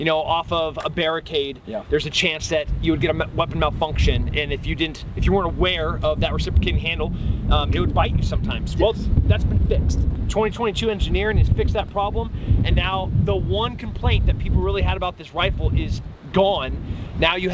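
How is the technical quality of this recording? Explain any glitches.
Nothing stood out on listening; the audio comes through a G.722 call path at 64 kbps, which leaves nothing above 8 kHz, and no glitches can be heard anywhere in it.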